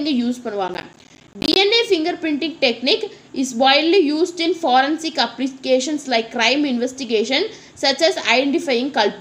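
The processor fell behind its audio deadlines from 0.68 to 1.56 s, causing processor overload crackle. Over that span it repeatedly failed to deliver buffers in time, and each miss was filled with silence. The result is a dense run of tiny hard-edged dropouts that turn into gritty crackle over the audio. The spacing of the gaps fits buffers of about 10 ms, with roughly thirty going missing before the load eased and the sound cleared.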